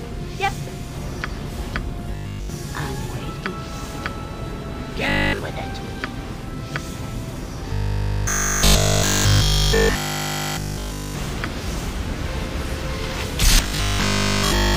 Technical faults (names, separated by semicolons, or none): robotic sound from repeated short buffers